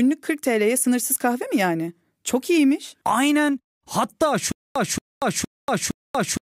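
A speech recording that breaks into a stutter with silent gaps from 4.52 s and stays that way through the end at 6.46 s. The same 0.23 s fragment plays four times, each followed by about 0.24 s of digital silence, giving a steady cycle of roughly 0.46 s. The likely cause is a stalled player or stream that replays its last buffered fragment on each retry and then runs dry, so the audio that belonged in that stretch is missing.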